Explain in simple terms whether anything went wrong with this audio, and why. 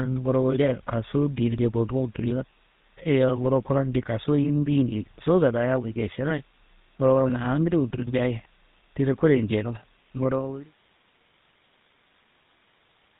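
The whole recording has gone through the GSM full-rate codec, the old mobile-phone voice squeezer. It cuts everything above 4 kHz and rebuilds the speech from coarse pulses, so the voice sounds buzzy and gravelly from start to finish, even through the gentle fade-out from around 10 s to 10.75 s.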